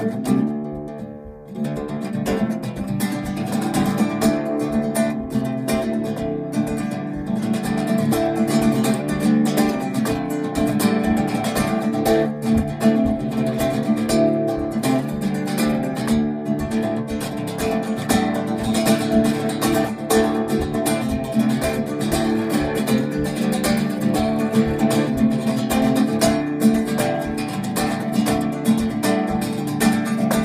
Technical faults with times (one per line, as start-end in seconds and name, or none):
none